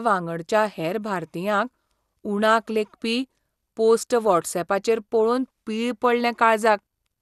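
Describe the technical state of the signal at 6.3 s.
At 6.3 s the speech carries MP2 compression artefacts, present across the whole clip: dull, band-limited with nothing above 12.2 kHz, and plainly gurgling. This is likely MPEG Layer II starving its upper sub-bands of bits, which fits a bitrate around 80 kbps.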